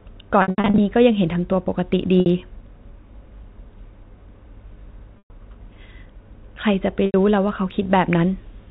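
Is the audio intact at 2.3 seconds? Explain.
No, not entirely. Packet loss with pitch repetition strikes just before that moment, from 2.20 to 2.26 s. About 60 ms of audio went missing, which fits three lost 20 ms packets. The receiver bridged the hole by repeating the last pitch period and fading it down. That gives a brief held, buzzy tone where the natural sound should be. By 2.3 s the original audio is returning through a short cross-fade.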